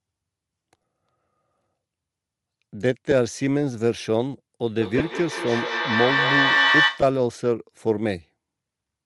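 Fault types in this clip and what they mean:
Bluetooth LC3 compression: The speech was likely coded with Bluetooth's low-bitrate LC3 codec, which noise-fills the upper spectrum, giving a plainly audible breathy, grainy edge throughout.
lost LE Audio frames: Dropped radio frames made the decoder repeat its last spectrum with scrambled signs, leaving short noisy smears, the longest cluster spanning about 75 ms.
feedback howl: A second device's microphone picked up the loudspeaker and looped the call, building a tone near 2 kHz with a loop delay of roughly 200 ms, peaking about 3 dB above speech.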